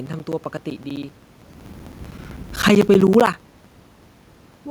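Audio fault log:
0.06–4.61 s, periodic USB or driver dropouts: a steady tick runs under the speech the whole way, one every 64 ms, so roughly fifteen a second and about seventy in all. Each time, something is blocking the USB bus or audio driver on a fixed schedule, and a chunk of around 10 ms gets dropped and replaced with silence. That tiny hole in the waveform is what you hear as a click, and it only shows up where there's signal to cut into.
2.52–2.96 s, automatic gain falling: the level sinks by about 4 dB over under half a second, and the room noise goes down with the speech, which tells you it's the gain control pulling back rather than anything at the source. It judged the input too hot or its background too noisy and eased its gain down gradually, so you get a smooth sag instead of a step. It comes about a second after the talker shifted position around 1.5 s.
3.03–3.52 s, automatic gain rising: right around 3.0 s the talker moves away and the input drops by about 16 dB. 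The gain control reads that as too quiet and climbs back by about 4 dB over roughly half a second. Because it's gain on the whole signal, the speech and the background swell up together. It only wins back a fraction of the loss, so the speech stays well down.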